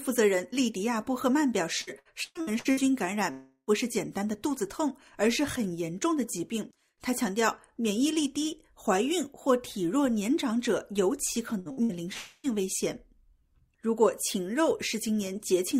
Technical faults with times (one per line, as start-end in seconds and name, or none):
1.81-2.80 repeated packet loss (robotic sound)
3.31-3.70 long network dropout
11.59-11.92 burst of packet loss
12.13-12.47 long network dropout